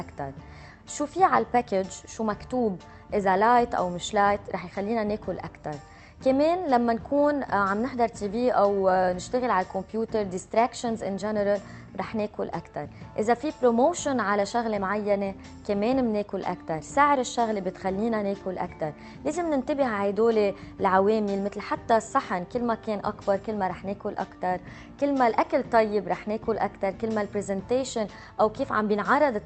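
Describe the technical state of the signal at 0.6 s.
At 0.6 s the audio is intact, with no dropout, glitch or other fault at that point, only the band limit of the Opus call path, whose high end stops around 8 kHz.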